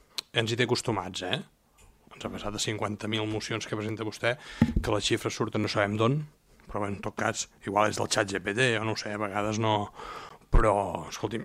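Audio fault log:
10.29 s, block of digital silence: the sound drops out for about 15 ms and returns with no fade. Being so short, it comes across as a brief tick.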